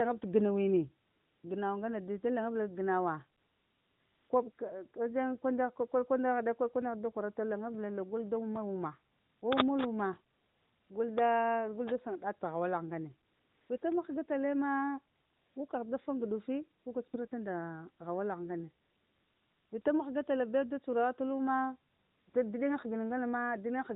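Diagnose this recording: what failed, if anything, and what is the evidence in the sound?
AMR comfort noise, codec stage: transmission halted in pauses between 1.06 and 22.34 s, lasting 40 to 900 ms, leaving smooth synthetic hiss, seen as flat, abruptly switched spectrogram patches.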